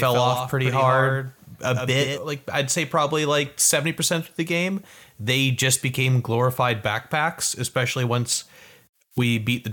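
A second capture path, or an edit holding two out-of-step copies, has likely mixed this speech in twice: a doubled audio track runs from the start to 2.18 s, with a dry, full-band copy trailing about a tenth of a second behind, roughly 5 dB quieter, then cutting off abruptly.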